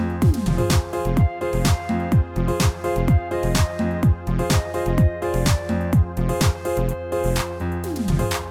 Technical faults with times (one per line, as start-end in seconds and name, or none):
none